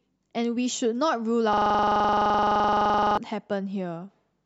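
A system hang loop from 1.53 to 3.17 s: the computer or driver froze while hardware replayed one 42.7 ms chunk, heard as a 23.4 Hz stutter.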